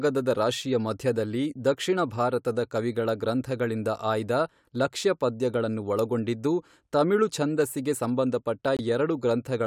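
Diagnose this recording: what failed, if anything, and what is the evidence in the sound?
Near the end of the speech, from 8.77 to 8.81 s, the sound drops abruptly into dead silence for about 40 ms, then resumes with no shift in timing. This is a corrupt frame muted fault at the codec stage. Bit errors damaged the compressed data, the decoder rejected the affected frames, and the player substituted silence for exactly their duration. A 40 ms gap fits a run of several short codec frames, perhaps four of about 10 ms each.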